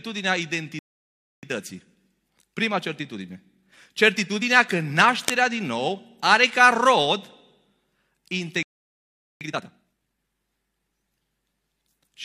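At 0.79 s the speech cuts out for 0.64 s, a playback stall. The player likely ran dry or was blocked, then resumed.

From 1.43 to 4.43 s the speech runs about 1.1 times fast at normal pitch. This is time-compressed catch-up, trimming the backlog.

From 5.13 to 5.34 s a burst of cable scratch noise rasps over the speech, roughly 10 dB below it. A loose connector being moved is the likely cause.

A second stall silences the speech from 8.63 to 9.41 s, for 0.78 s. Catch-up follows until 10.19 s at double speed, clearly hurried.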